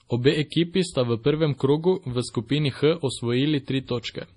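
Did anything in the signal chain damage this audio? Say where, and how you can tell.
Yes. The damage sits at the codec stage and is most likely heavy MP3 compression, consistent with a low bitrate around 32 kbps. The speech has nothing above 10.5 kHz, the hard treble ceiling an encoder imposes when it runs out of bits. Weak frequency lines are discarded and flicker in and out between frames, so the voice takes on a watery, swirling texture, with metallic chirping on s sounds and softened consonant edges.

The same codec causes pre-echo from 0.50 to 0.52 s, just before "sta v prvem krogu". That attack lands late in a transform block, and the encoder spreads quantisation noise across the entire block. Noise sized for the loud onset therefore spills into the quiet stretch before it, leaving about 22 ms of short hiss ahead of the attack. The onset itself sounds blunted and smeared rather than crisp.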